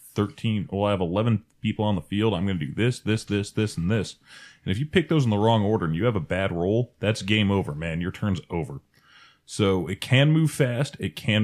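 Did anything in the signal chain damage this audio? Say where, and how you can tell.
No, nothing in the signal chain has damaged this speech recording. Listening closely across the whole clip turns up no stage and no moment where anything went wrong.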